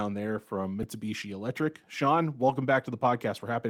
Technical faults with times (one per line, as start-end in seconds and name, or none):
0.83 repeated buffer
2.48-2.50 lost packet rebuilt from error correction